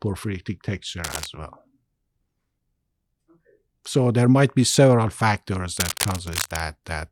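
A worn cable or connector was likely being moved, its contact flickering, so scratchy bursts of cable scratch noise, roughly 10 dB under the speech, follow "porphyritic texture" at 1.04 to 1.26 s and "might be several factors" at 5.77 to 6.6 s.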